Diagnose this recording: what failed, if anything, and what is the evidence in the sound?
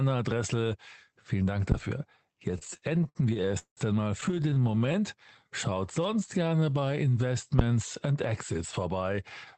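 Phantom power thump at 1.72 to 1.87 s and again at 7.59 to 7.78 s. This is in the analogue wiring stage. Each event is a deep, low-frequency thud that dies away quickly: about 33 ms for the first and 43 ms for the second. That signature fits a supply voltage being switched on a live microphone input. The sudden DC step passes through the input coupling capacitors and reaches the preamp as a brief bass transient.

Repeated stalls (stutter) from 2.51 to 3.79 s and from 4.21 to 4.96 s. This is at the network and jitter buffer stage of the call. In the first stretch, 462 ms of sound is filled in across many short halts, about 36% of the span. The longest wait is 182 ms, where the held sound audibly fades. The second stretch has shorter, denser hiccups, none over 22 ms, filling 209 ms, about 28% of that span. Nothing is lost. The speech drags and jerks as the buffer keeps running dry and the receiver stretches the last sound until packets catch up.

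Jitter buffer slow-down from 5.48 to 7.33 s. This is at the receiver's buffer stage. Speech here plays at about 89% speed with the pitch unchanged, so syllables and pauses sound drawn out. Some 213 ms is added in total. The receiver repeated individual pitch periods and pause fragments to rebuild its reserve of audio. This runs over an Opus call path whose audio bandwidth tops out near 8 kHz.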